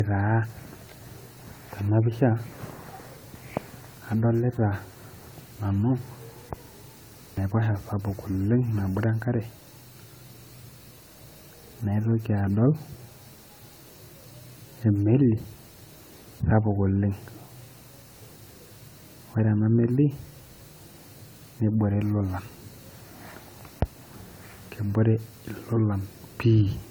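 Across the whole clip the speech has a swirling, hollow texture, with smeared consonant attacks and a watery shimmer in the upper spectrum, even though content extends up to about 20 kHz. This is likely generation loss: the audio appears to have gone through an AAC-LC encoder at around 96 kbit/s roughly five times, each pass requantising on a shifted frame grid so noise and spectral holes accumulate. A single encode at that rate would sound far cleaner; the compounded smearing marks repeated passes.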